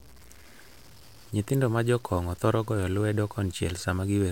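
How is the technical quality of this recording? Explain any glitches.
The quality's pretty rough, with one problem running the whole way through. Throughout the speech there's a grainy, fizzy distortion that rides along with the signal, about 30 dB below it, getting gritty on quiet syllables and tails and sputtering as things fade toward silence. That's low bit depth without dither, most likely. The level steps sound coarse enough to fit roughly 7 bits, with values truncated rather than dithered, so the error tracks the signal instead of sitting underneath it as steady hiss.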